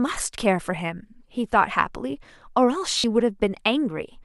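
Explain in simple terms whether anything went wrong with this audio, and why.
Lost LE Audio frames, 2.98 to 3.04 s: for about 60 ms the Bluetooth link dropped audio, so the decoder filled the gap by repeating recent sound as a brief noisy smear.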